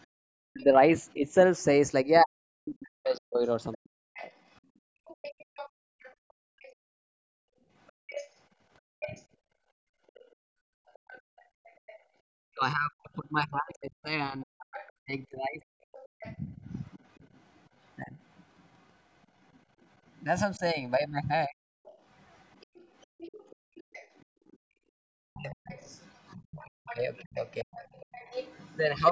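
From the very start to 29.01 s a faint second voice runs underneath, about 20 dB below the main talker. This is the other side's voice leaking through, likely loudspeaker sound the echo canceller failed to remove from the microphone. It is an added voice, not a dip in the main one.

From 0.07 to 0.15 s the room background collapses, by up to about 33 dB, for well under a tenth of a second, then snaps back. This is background gated by the echo canceller. It clamped the microphone while the loudspeaker played, so the room tone drops out rather than any talker.

Between 0.43 and 4.29 s the talker's own voice sinks by as much as roughly 40 dB, in pieces adding up to about two seconds. This is speech suppressed in double talk: with both sides likely active, the canceller turns the wanted voice down along with the echo.

The background gating returns from 4.61 to 12.17 s, about five seconds of room-sound holes up to about 34 dB deep. 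Inside that stretch, at 9.02 to 9.18 s, a brief double-talk dip of roughly 25 dB clips the talker. Heavier double-talk suppression follows from 12.47 to 21.6 s, around three seconds in total and up to about 40 dB. More background gating comes at 23.07 to 24.64 s, about 33 dB deep over most of a second. Double-talk suppression then runs from 24.92 s to the end, about one and a half seconds of the voice cut by up to roughly 40 dB.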